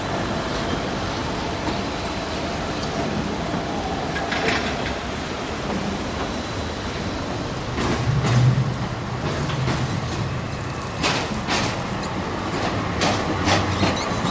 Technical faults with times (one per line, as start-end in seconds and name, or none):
none